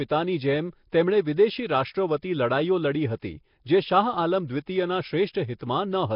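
Speech throughout, with a rough, hissy halo and smeared, underwater texture, everything dying above 5.3 kHz: heavy Nellymoser compression likely, sounding like a low rate near 22 kbps. Around 3.20 to 3.22 s there's pre-echo, about 25 ms of hiss smearing ahead of a sharp attack as block noise spills forward.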